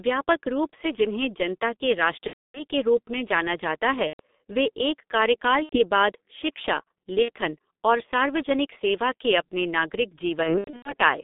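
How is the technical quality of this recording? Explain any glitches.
The recording is heavily degraded narrowband telephone speech, with five packet-loss glitches on top.

G.723.1 codec, throughout: the audio sits between 200 Hz and 3.7 kHz, and its heavy coding damage fits a roughly 6 kbit/s codec. Its slowly updated voice model makes the speech hoarse and smeared, with blurred consonants. That hoarseness separates it from plain band-limiting, which only muffles.

VoIP packet loss concealed by the speech codec, at 2.27–2.66 s (between "से जिन्हें जनता के" and "के रूप में जाना"), 4.07–4.20 s, 5.63–5.78 s (just before "बाद शिक्षा"), 7.22–7.30 s (between "बाद शिक्षा" and "और सार्वजनिक सेवा के") and 10.43–10.94 s. Missing audio spans 270, 120, 90, 60 and 240 ms. The last is scattered over about 420 ms, in runs up to 90 ms. The decoder repeats its last pitch and filter at falling gain, so the speech stretches into a fading buzz or coloured noise, and it is muted from the third lost frame in a row. 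It stays weak briefly after each gap.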